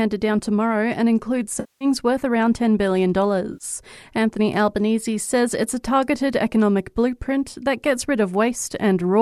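From 1.60 to 1.85 s, just before "worth around", there is AAC frame loss with concealment. Coded frames went missing, and the decoder filled the gap from the last good spectrum. The patch lasts about 0.25 s, which fits some 21 lost frames. It sounds smeared or noisy rather than silent. A shorter gap follows at 3.53 to 3.64 s, about 0.11 s long. The sound underneath likely passed through low-delay AAC compression, with light coding damage.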